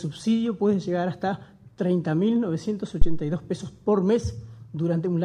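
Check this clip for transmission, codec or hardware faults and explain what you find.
One hardware fault stands out. From 3.02 to 3.26 s a deep, low thump cuts in, peaking at about -4 dBFS and decaying over 55 ms. This is a phantom power thump: switching the supply on a live input sends a sudden voltage step through the coupling capacitors.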